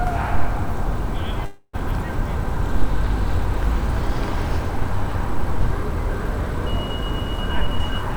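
A clip of everyday sounds with two faults. From 1.45 to 1.75 s there is a call audio freeze: the sound smears into a fading buzz, then 50 ms of silence, and resumes without loss. Delayed packets likely starved the jitter buffer. From 7.48 to 8.12 s, a jitter buffer speed-up plays the audio at 111% speed with unchanged pitch, trimming about 70 ms to reduce the built-up delay.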